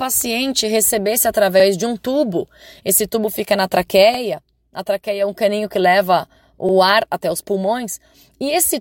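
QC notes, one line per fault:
4.14–4.19 s and 6.69–6.73 s, overlapping chunks: right after "tubo fica na" and again between "um caninho que leva" and "ar até os", about 44 ms of audio plays twice, giving a quick stutter. Each new chunk starts a bit before the last one ended, and the joins land roughly 2.5 s apart.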